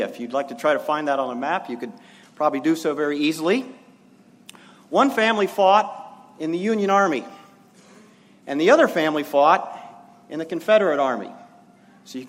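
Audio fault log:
No technical faults can be heard anywhere in this audio. Nothing in the sound calls for a timed entry in this log.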